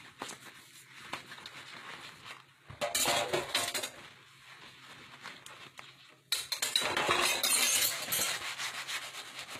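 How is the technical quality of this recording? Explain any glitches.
The technical quality is compromised by clearly audible codec damage that runs the full length of the clip.

HE-AAC compression, throughout: the damage is most likely from this codec. Only the lower spectrum is truly coded, and the treble is rebuilt by copying lower bands upward under a coarse envelope, so the highs stay bright but don't match the original harmonics. The top end sounds gritty and metallic, and nothing reaches above 14.9 kHz. The strength of the damage fits a bitrate around 20 kbps.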